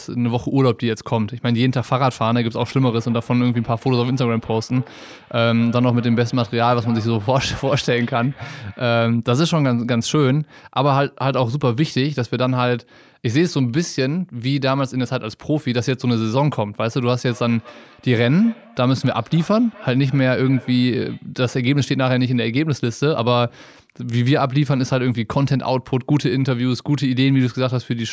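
Feedback echo between two devices, 2.56 to 8.99 s and 17.28 to 21.34 s: a second device replays the speech into the microphone, so it returns about every fifth of a second, about 23 dB down.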